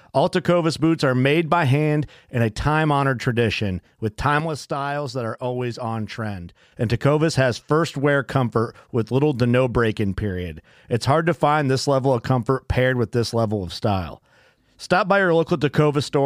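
At 4.4 s the speech and the background noise drop together by about 7 dB in a single step, then return just as abruptly at 6.72 s. This sudden gain jump most likely comes from a digital level change applied instantly, with no ramp. Because the noise floor falls and recovers in lockstep with the speech, and the change is a clean step rather than a gradual swell, it is distinct from a fade or from compressor pumping.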